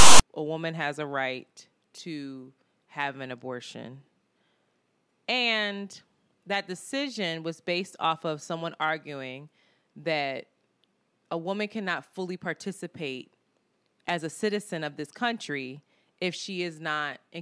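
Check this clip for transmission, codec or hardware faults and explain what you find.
File tags played as audio at 0.0–0.21 s, before "a woman has a": text metadata and its zero padding were decoded as samples, giving a hard-edged, one-sided rasp, then silence.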